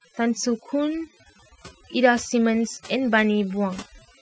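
Overdone noise removal runs through the whole clip, pushing individual frequency bands down whenever they sit near the estimated noise floor. The quieter parts of the speech vanish with them, leaving the voice over near-silence with twinkling specks, rather than a gate's abrupt on-off cuts.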